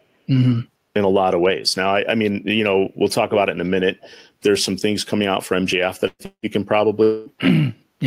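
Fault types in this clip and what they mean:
burst of packet loss: At 6.07 s the last sound is held and fades for about 0.12 s, then a short silence, and resumes with about 120 ms missing. A few consecutive packets never arrived, so the receiver stretched the last sound over the gap.
long network dropout: At 6.26 s and again at 7.03 s the last sound is held and fades for 0.18 s and 0.23 s, the first ending in brief silence, with 180 and 240 ms lost. A longer interruption in arriving audio is the likely cause.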